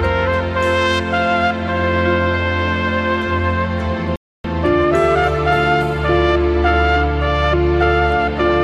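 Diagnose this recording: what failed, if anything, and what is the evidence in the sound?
A rebuffering stall at the playback stage: at 4.16 s the sound drops to silence and picks up again at 4.44 s from exactly where it stopped. The player's buffer emptied and it waited for more data, adding about 0.28 s without losing any audio.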